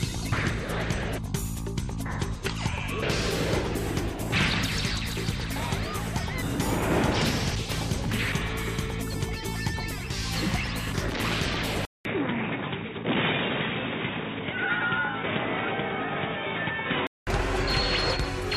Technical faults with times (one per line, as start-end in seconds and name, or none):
11.85-17.27 input switched to a poorer device